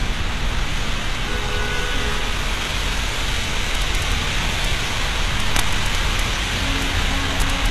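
Throughout, the treble sounds synthetic and gritty, and nothing is heard above 12.3 kHz. This is likely HE-AAC compression at a low bitrate, around 16 kbps. Upper bands are copied up from lower ones, so harmonics no longer line up.

From 3.75 to 4.12 s, violent cracks cut in. This is integer overflow. Peaks pass the integer limit by about 1 dB and wrap to the opposite sign instead of being limited. More cracks follow at 4.64 s, from 5.40 to 6.20 s (about 2 dB over), at 6.82 s, and from 7.40 to 7.66 s. They are far sharper than clipping.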